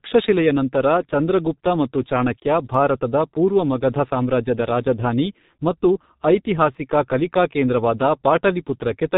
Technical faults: G.723.1 codec; dropped samples

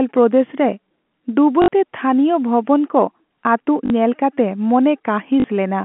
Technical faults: packet loss with last packet repeated

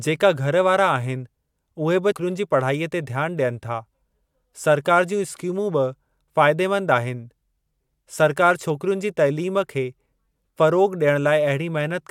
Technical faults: compressed frames skipped

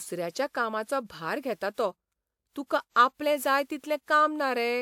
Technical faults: generation loss

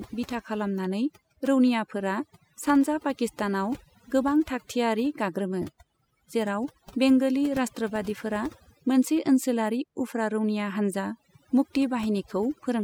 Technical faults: overdone noise removal

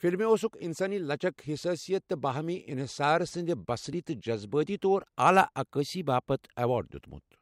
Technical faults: dropped buffer (overrun)

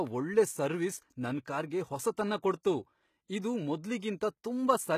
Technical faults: HE-AAC compression; pre-echo

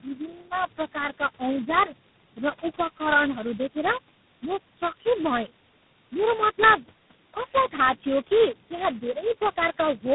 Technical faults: tandem speech coding

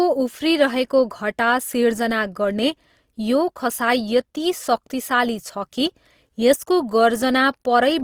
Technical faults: Opus compression

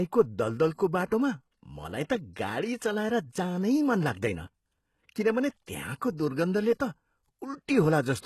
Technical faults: HE-AAC compression

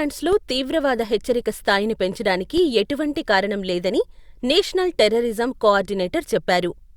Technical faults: DC step

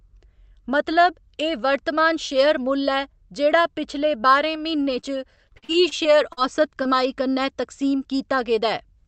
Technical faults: repeated packet loss (robotic sound); short concealed packet loss

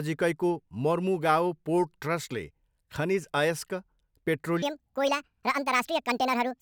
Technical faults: section at the wrong speed

